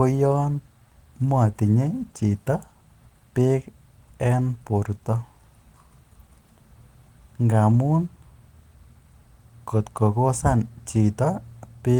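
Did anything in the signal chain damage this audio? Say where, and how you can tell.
No, nothing in the signal chain damaged this audio.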